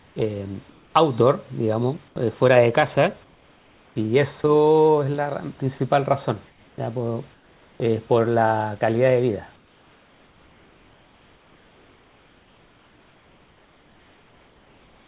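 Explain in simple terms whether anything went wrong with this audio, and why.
Comfort noise in place of the background appears from 0 to 0.94 s, 2.08 to 2.16 s, 3.24 to 4.44 s, 5.78 to 7.8 s, and from 9.56 s to the end. In the pauses between speech, the natural room sound is swapped for a smooth, featureless hiss. This is likely because the sending side stopped transmitting during silence, and the receiving side filled the gap with made-up noise shaped roughly like the room.

Sound dropped by the voice detector occurs at 4.42 to 4.44 s and 5.78 to 5.80 s. At each of these edges, a tiny sliver of the sound itself is lost and replaced by the same steady filler noise. The sender's speech detector likely mistook that quiet bit of sound for background and cut transmission a moment too early, or resumed it a moment too late. This clips the edge of the sound. The call line carries nothing above 4 kHz, which gives the audio its narrow, telephone-like tone.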